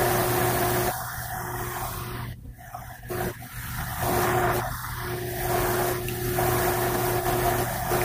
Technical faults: none

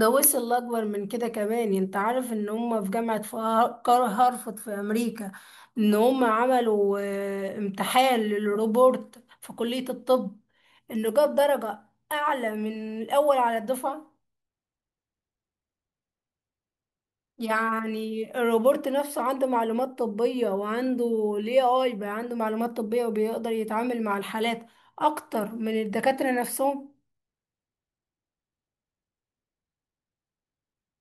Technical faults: none

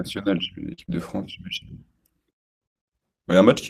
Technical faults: short concealed packet loss; lost packet rebuilt from error correction

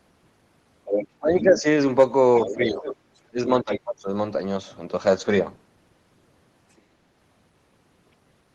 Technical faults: other side's voice leaking through; speech suppressed in double talk

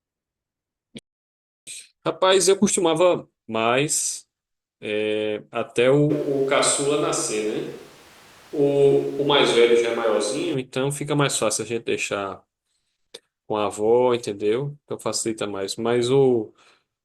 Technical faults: playback stall; time-compressed catch-up; switch to a distant microphone

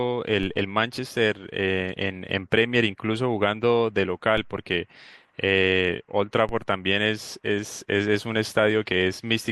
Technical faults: DC step

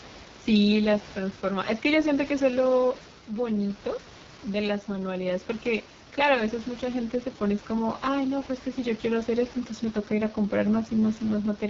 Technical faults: AMR wideband (HD Voice) codec

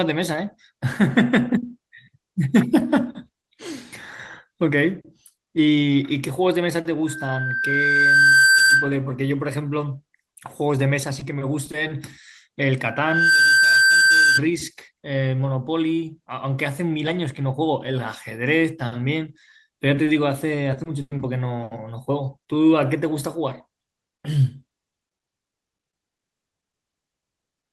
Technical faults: loudspeaker feedback squeal; short concealed packet loss; repeated packet loss (robotic sound)

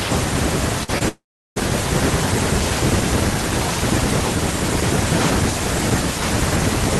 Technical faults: burst of packet loss; short concealed packet loss; long network dropout

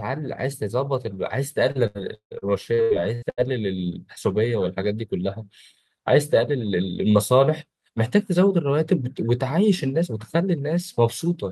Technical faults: repeated packet loss (robotic sound)

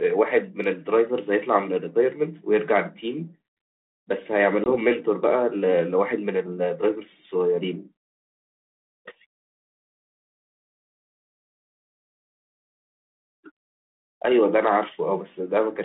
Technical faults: packet loss on an ADPCM call

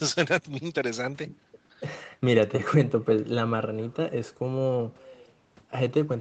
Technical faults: echo with no canceller

